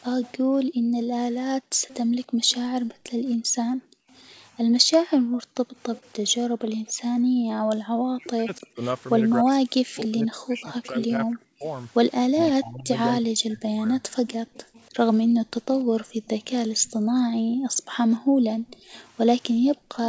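From 0.24 to 10.88 s there's an echo leak. A faint copy of the speech trails the original by about 284 ms, sitting roughly 25 dB down. The far end was likely on a loudspeaker, and its echo canceller didn't fully scrub what the mic picked up, so that leftover came back down the line.

Overlapping that, from 0.37 to 7.88 s, the background gets gated by the echo canceller. Whenever the loudspeaker was active, the canceller clamped the mic hard, so the room tone ducks by up to about 40 dB and then pops back when it releases. Those dips add up to around four seconds across that span, which gives the noise floor a pumping, on-off feel.

From 8.16 to 14.02 s it's speech suppressed in double talk. Both sides were likely talking at once, so the canceller couldn't tell its own talker from the echo and pulled everything down. The voice sinks by as much as roughly 40 dB for something like four seconds in total.

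The echo leak comes back from 14.29 to 19.78 s, with the same 284 ms lag but quieter at about 30 dB under the speech. From 15.29 s to the end the background gating returns too, with dips of up to about 33 dB. Throughout, nothing gets past 8 kHz, which fits the G.722 wideband path.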